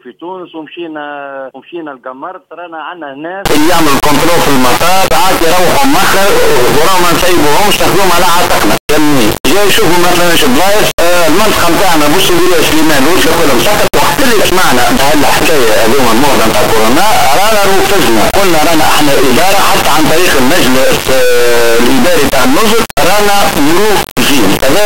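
From 3.46 s to the end, an integer read as float fault gives a harsh, extremely loud buzzing square wave. This fits 32-bit integer samples being decoded as 32-bit float.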